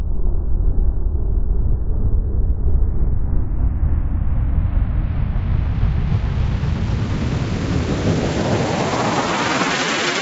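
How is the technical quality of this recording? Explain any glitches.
No technical glitches can be heard anywhere in this recording of everyday sounds; the signal stays continuous and intact throughout.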